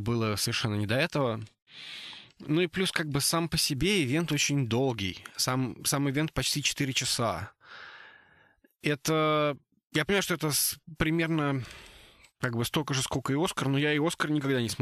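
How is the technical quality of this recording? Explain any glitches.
The recording has three brief glitches, all from compressed frames being skipped, in a speech clip.

At 0.44 s, just before "не до этого"; at 6.46 s, just after "сам ивент"; and at 10.08 s, just before "что это примерно", the audio jumps ahead by about one 23.2 ms frame. That frame was missing or rejected by the decoder. Because adjacent frames overlap, each join is a soft, smeared blip rather than a sharp click or a silent gap.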